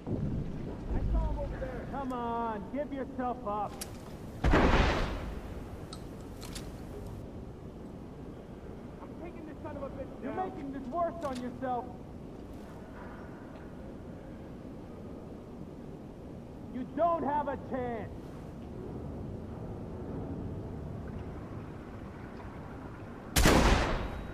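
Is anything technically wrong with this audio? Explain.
Yes. From 3.81 s to 7.22 s the audio turns thin, bright and hissy at the top, with sibilant edges standing out before the tone settles back. This is pre-emphasis left on: the treble was lifted before storage or transmission, and the matching de-emphasis cut was never applied on playback. The boost reaches about 8 dB at 10 kHz relative to 1 kHz, and its shape fits the 50/15 µs CD emphasis curve.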